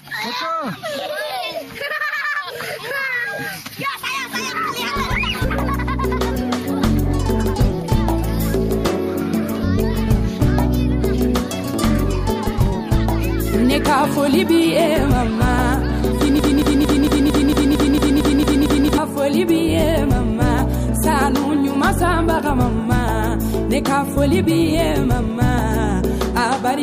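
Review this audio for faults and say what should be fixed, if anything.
Broken-record loop from 16.39 to 18.98 s. A 0.23 s fragment repeats eleven times, likely from a stalled stream resending its last buffer. That span's audio is lost.

Make the player output silence on a stall instead of replaying stale data.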